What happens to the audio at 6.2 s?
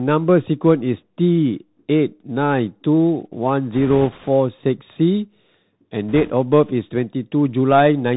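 From 6.09 to 6.32 s the speech is hit by bit errors on a Bluetooth voice link, at a rate of roughly two percent. Each flipped bit nudges the one-bit up/down stream slightly the wrong way, so the damage is a rushing, crackly noise with no sharp clicks. On a spectrogram this appears as a diffuse band of broadband speckle over that stretch. The waveform shows fine jitter riding on the signal but no spikes.

Underneath, the Bluetooth CVSD headset codec is audible throughout at 64 kbps. Its step-tracking coder stops everything above 4 kHz, roughens sibilants and adds a granular hiss. On a spectrogram this shows as a hard ceiling at 4 kHz with a grainy noise floor.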